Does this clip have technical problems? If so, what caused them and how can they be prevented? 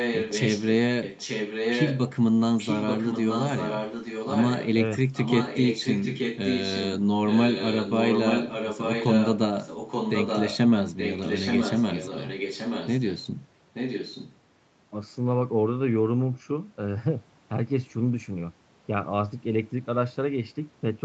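Yes, there is an echo leak. One side of the call was likely playing it over a loudspeaker, and its echo canceller failed to remove everything the microphone picked up, so part of it was sent back. The result is a delayed copy of the speech, about 0.88 s behind the original and about 5 dB below it. It is heard at 0.0–0.67, 1.02–2.01, 2.58–4.71, 5.13–6.89, 7.27–9.39, 9.63–10.58 and 10.97–13.26 s. At 13.73–14.36 s it is fainter, about 10 dB down. A headset on that side, or an echo canceller able to track an echo path this long, would stop the speech from coming back.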